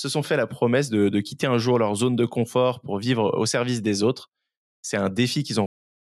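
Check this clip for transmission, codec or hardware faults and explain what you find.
The speech has a cut-off end at 5.66 s: the final buffers were never written out, so the sound stops mid-utterance and falls straight to digital silence with no natural decay. On the waveform it is a sudden flat line; the spectrogram goes abruptly blank across all frequencies.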